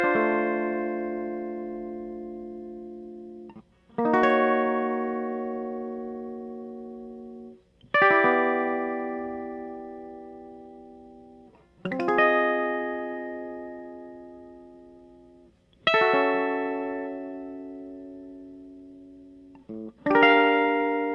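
Music, with no audible technical faults anywhere in the recording.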